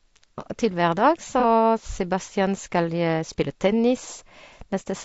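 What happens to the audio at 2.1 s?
Low-delay AAC compression is present at 2.1 s, as it is across the whole clip. The speech sounds rough and grainy, with noise filling the gaps between pitch harmonics. That points to the short frames of AAC-ELD, likely running at a low bitrate around 32 kbps.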